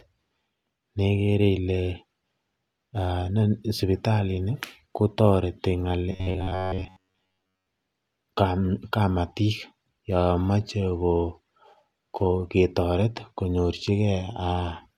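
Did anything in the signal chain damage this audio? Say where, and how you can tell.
Yes. The damage sits at the driver or buffer stage. From 6.12 s to 7.67 s, just after "sipitalini kotoreti", the speech turns into a rigid, metallic buzz. It still tracks the words loosely. The buzz sits at 93.8 Hz, which fits a repeat length of about 10.7 ms. This is robotic sound from repeated short buffers. The likely cause is audio arriving too seldom, so the software loops the last short block. Most of the real audio in that stretch is skipped.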